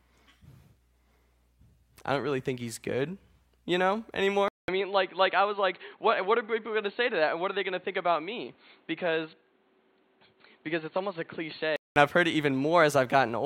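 At 4.48 s the speech cuts out for about 200 ms, then comes back dull and boxy, with nothing above 4.4 kHz and the level down by about 5 dB. A new, quieter background noise sits underneath, around 35 dB below the speech. That's likely an input switched to a poorer device, maybe another mic or a headset's call profile, with its narrower band and its own noise. At 11.96 s the fuller, brighter sound returns.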